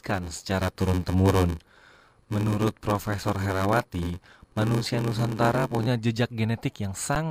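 Speech runs from 0 to 5.87 s with a block size mismatch (padded). Each block is written short, and the remainder is zero-filled, which fits a 512-sample read size. The result is a buzz at 93.8 Hz, and the speech plays at 0.861 times its normal speed. A waveform would show regular short flat gaps, and a spectrogram would show thin vertical stripes at that rate. At 7.15 s there is an underrun with held sample. The output sits on a flat line for about 10 ms. The audio then resumes, with roughly 10 ms of live audio lost.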